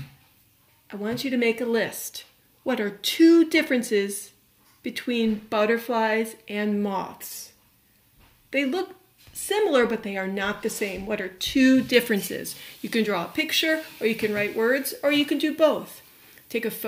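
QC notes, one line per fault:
11.94 to 16.88 s, pre-emphasis left on: from here to the end the top end jumps up, roughly 8 dB more at 10 kHz relative to 1 kHz, so everything turns thin, bright and hissy, with the sibilant edges spitting. The treble boost added before storage never got its matching de-emphasis cut on playback, and the shape fits the CD 50/15 µs curve. Flag it as a missing de-emphasis step rather than an EQ choice.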